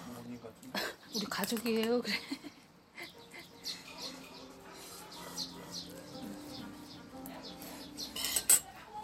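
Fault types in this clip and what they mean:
Doubled audio track: from 3.31 to 8.49 s a second copy trails by about 0.4 s, about 5 dB quieter and dry, likely from a slower duplicate capture path.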